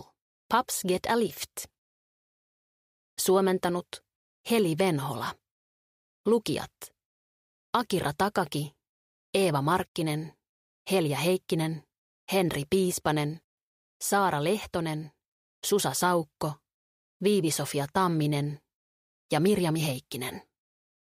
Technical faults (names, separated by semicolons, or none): none